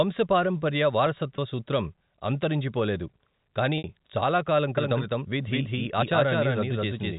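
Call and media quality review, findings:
Packet loss with pitch repetition: brief held, buzzy tone at 1.36 s, just before "సూత్రం అంతరించిపోలేదు"; longer 3.78–3.84 s gap fading toward silence, cross-fading back before "చాలా కాలం". Receiver concealment repeating last pitch period over 20 ms and 60 ms losses.

Doubled audio track: from 4.78 s, after "చాలా కాలం", to end. Dry full-band copy at roughly equal level, about a fifth of a second late, abrupt onset, no room decay. Likely second capture via slower path or misaligned edit. Band-limited G.711 path below 4 kHz passes both copies.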